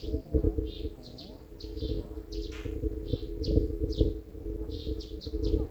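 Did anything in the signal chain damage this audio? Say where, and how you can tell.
Yes. There's overlap-add ripple from a frame-based processing stage, running the whole way through these sounds. The level swings about 60 dB around 400 times a second, giving a harsh metallic buzz, because the resynthesis windows overlap without summing to constant gain.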